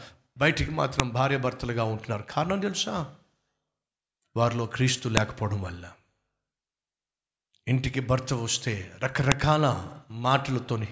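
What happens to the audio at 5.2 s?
At 5.17 s the speech is interrupted by a sharp, loud click: a file header played as audio, where leftover WAV header bytes at a join were decoded as samples. On a waveform it is a near-instant spike; a spectrogram shows a thin full-band vertical line.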